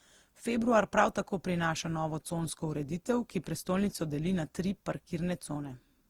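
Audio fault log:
Throughout, generation loss: the speech was likely decoded and re-encoded about seven times, which fits Opus at around 48 kbit/s. Each pass requantised on a shifted frame grid, stacking noise, so it sounds swirly, smeared and hollow with blurred consonant attacks.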